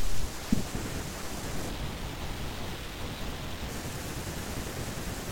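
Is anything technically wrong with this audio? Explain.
Yes. From 1.69 to 3.69 s the speech shows stereo read as mono: the left and right samples, which alternate in the stream, are taken one after another as a single channel. Each pair of samples stretches the same moment over twice the time, so the speech runs at 0.5x speed and drops 12 semitones, a full octave. A plain sample-rate mismatch would slow and lower the sound in the same way, but here a fainter mirrored copy also appears in the upper half of the spectrum.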